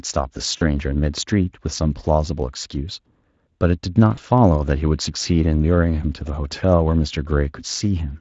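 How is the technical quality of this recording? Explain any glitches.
Two short dropouts stand out, both VoIP packet loss concealed by the speech codec. The first runs from 0.57 to 0.63 s, a gap of about 40 ms, which fits two lost 20 ms frames. The second, from 4.15 to 4.19 s, is about 20 ms, likely a single frame. The decoder papers over the gap by repeating its last pitch and vocal-tract filter at falling gain, so you get a brief buzzy or noisy, smeared blip instead of silence, and the sound takes a moment to firm up afterwards. Underneath, Speex at roughly 24 kbps adds only light codec damage.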